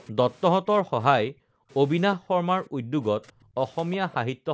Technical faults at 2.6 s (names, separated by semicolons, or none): background gated by the echo canceller; echo leak